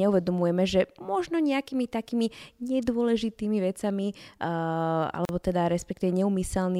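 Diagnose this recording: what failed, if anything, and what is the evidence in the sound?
The speech was encoded in separate pieces and joined without trimming encoder delay and last-frame padding, a gap at a join of encoded pieces. At 5.25 s a silence of about 39 ms cuts the speech, edges smeared, before it resumes where it stopped, ending at 5.29 s.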